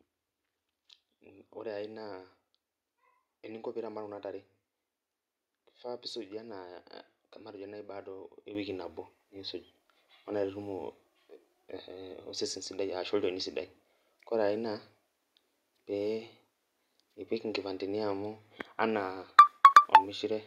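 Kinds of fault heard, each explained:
Microphone volume stepped up, at 8.55 s: the calling software judged the microphone too quiet and raised its input volume in a single jump of about 9 dB, so the speech and the background noise both become louder at that same instant.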